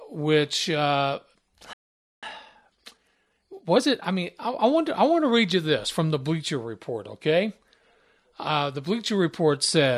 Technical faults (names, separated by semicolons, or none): playback stall; time-compressed catch-up